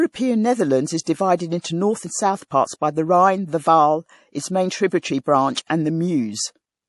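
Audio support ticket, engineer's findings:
Hard treble cutoff at 11.4 kHz for the full clip, with watery, swirly sibilants and smeared attacks. Likely MP3 compression at a low bitrate, around 48 kbps. Spectrogram shows a flat ceiling at 11.4 kHz and speckled high bands flickering frame to frame.

Pre-echo at 1.61 to 1.64 s, about 29 ms of hiss before "north and south parts", and again at 5.55 s. Codec block spreads quantisation noise ahead of the attack. Waveform shows low-level fuzz before the onset. Spectrogram shows a faint vertical smear preceding the transient.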